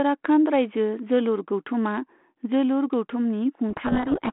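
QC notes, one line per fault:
3.70–4.30 s, codec payload misread: in the last 0.6 s the speech sinks under harsh, rasping distortion. The G.726 decoder is taking each code word with its bits in the wrong order, so the adaptive predictor follows the wrong differences. The 32 kbit/s G.726 line before this point, with only light coding damage, shows the receiver normally matches the sender. On a spectrogram, harmonic striations dissolve into dense noise capped near 3.4 kHz. The waveform turns jagged and grainy.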